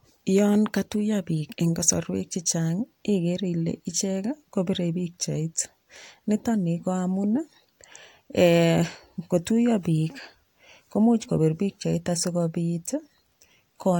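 A speech recording with no audible technical faults.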